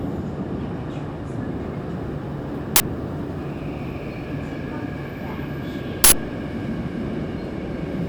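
At 2.76–2.80 s and 6.04–6.12 s, an uninitialised buffer plays leftover memory as loud digital noise bursts: dense waveform slabs and broadband spectrogram blocks.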